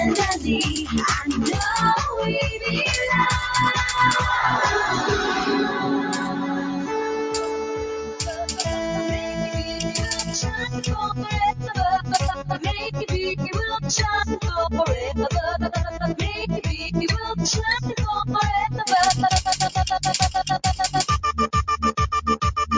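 Held parts of the sound keep swelling and sinking by a few decibels while sharp onsets come through intact, giving a pumping, slightly fluttery quality across the whole clip, whose band stops at 8 kHz as is normal for call microphone processing. This is a noise suppressor applied to music or sounds: a suppressor tuned for speech treats sustained tones, ambience and decay tails as noise and keeps pulling them down. From 7.84 to 8.61 s the audio dips sharply, falling by up to about 12 dB. This is sound cut by the noise suppressor, which judged that passage to be noise and attenuated it far more heavily than the material around it.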